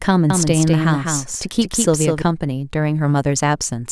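From 0.30 s to 2.22 s, a second copy of the speech is mixed in, likely from a slower capture path running alongside the main one. This doubled audio track trails by about 200 ms at roughly 5 dB below the original, with no reverb tail, and cuts in and out abruptly.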